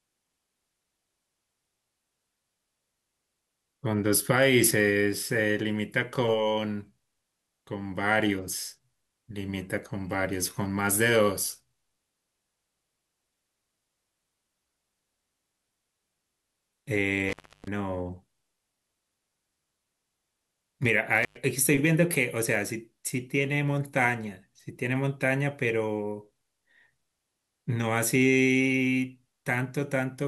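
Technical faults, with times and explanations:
17.29–17.68 s and 21.23–21.37 s: intermittent contact. A loose connection briefly opens, for 0.31 s and then 0.10 s, so the speech cuts out with crackle at each edge and faint hiss between.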